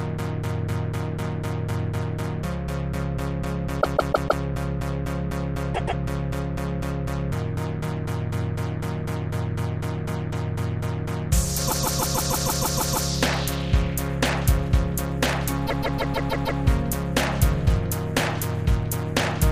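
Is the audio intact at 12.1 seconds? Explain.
No. From 11.67 to 13.08 s the sound stutters, one 157 ms block replaying nine extra times. These are repeated frames: the same compressed frames were played again, adding 1.41 s.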